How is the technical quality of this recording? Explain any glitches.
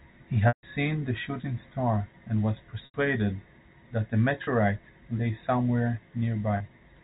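Four short dropouts break up the speech, bridged by packet loss with pitch repetition, heard through the narrow band of G.711 telephone coding.

The gaps fall at 0.48 to 0.63 s (150 ms), 2.85 to 2.94 s (90 ms), 4.44 to 4.47 s and 6.57 to 6.60 s (30 ms each), which fits 30 ms packets. The receiver loops the last pitch cycle and fades it. The two brief ones sound like a slightly held buzz. The longer ones fade toward silence before speech cross-fades back. On a spectrogram, harmonics run flat and unchanging, then fade; the waveform shows identical repeating cycles shrinking in amplitude.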